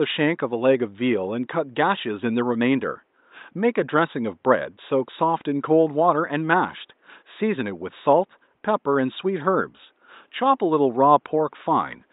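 No technical faults occur at any point in the speech.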